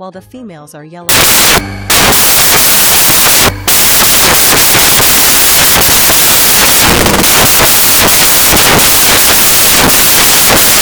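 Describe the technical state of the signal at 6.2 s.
Samples built from the wrong bytes are at work at 6.2 s; the fault runs from 1.09 s to the end. The reader is assembling each sample from misaligned or swapped bytes, so the rapidly fluctuating low-order bits end up in the most significant position. The result is loud, harsh broadband noise, close to white on loud passages and often a pitched buzz on softer ones.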